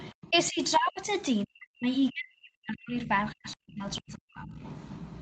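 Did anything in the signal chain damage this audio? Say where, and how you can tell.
Yes. In call processing, speech was suppressed in double talk, likely because the echo canceller confused the talker with loudspeaker echo. The speech drops by roughly 40 dB at 0–0.6, 1.45–1.89, 2.1–3.1 and 3.33–4.63 s, and by about 20 dB at 0.76–1.09 s.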